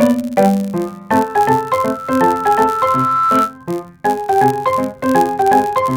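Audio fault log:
Throughout: block size mismatch (padded). One stage hands over blocks slightly shorter than the next stage expects, and the shortfall in each block is filled with zeros. Those brief silent slivers recur 91.5 times a second, so a steady buzz at 91.5 Hz sits under the whole sound. The padding also stretches the timeline. The audio runs at 0.996 times normal speed, with pitch essentially unchanged.
1.13 to 3.58 s: loudspeaker feedback squeal. A microphone is picking up the loudspeaker it drives, and around 1.3 kHz the loop gain climbs past one. That frequency keeps recirculating and reinforcing itself, so a single tone emerges and swells over roughly two seconds until it stands a few decibels above the rest of the sound. It cuts off at 3.58 s.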